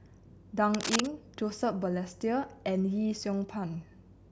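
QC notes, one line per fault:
0.74–1.07 s, cable scratch noise: a third of a second of dense, uneven scratching sits over the speech at about the same loudness, likely from a worn cable or connector shifting contact. Unlike isolated digital clicks, the bursts cluster irregularly.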